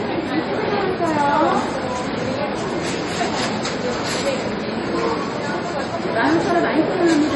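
From start to finish the sound has a watery, swirling quality, with faint components flickering in and out and attacks smeared rather than crisp. Nothing is present above 11.4 kHz, so the top end sounds dulled. This is likely heavy MP3 compression, at a rate that fits roughly 32 kbps. With so few bits, the encoder drops the treble at a fixed cutoff and discards weak frequency detail that changes from frame to frame, which produces the swirl.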